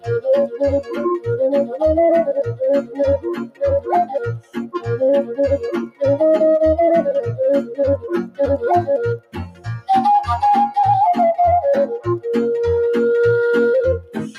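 A noise suppressor meant for speech is applied to music or sounds throughout. It mistakes steady sound for noise, so the level pumps by roughly 10 dB.

Sound is cut by the noise suppressor at 0.82, 2.82, 3.18, 4.4, 5.87, 7.64 and 9.18 s. Held sound sinks by about 12 to 17 dB, then returns.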